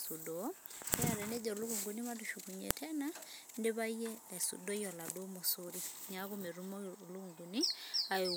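At 0.94 s and again at 2.71 s, a sharp, loud click cuts into the speech. Both are a file header played as audio. Separate pieces were joined with their WAV headers left in. Those header bytes play as raw samples, producing a brief snap unrelated to the speech.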